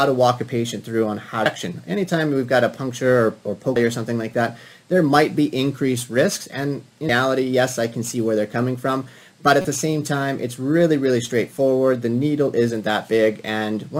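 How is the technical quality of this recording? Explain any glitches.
Four brief glitches break the recording, at 1.46, 3.76 and 7.09 s, with a longer one from 9.62 to 9.65 s, each caused by damaged data in a compressed stream. Corrupted bytes make the decoder misread frames and lose sync until it finds the next valid frame header.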